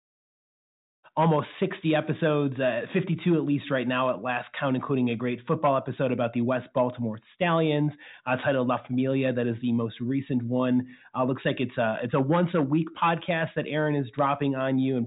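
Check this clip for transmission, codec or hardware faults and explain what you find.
No transmission, codec or hardware faults are audible: the speech comes through a G.726 ADPCM path at 40 kbit/s with at most faint coding grain and nothing above about 3.8 kHz, and the smooth fade-in at the start reaches full level by 1.07 s.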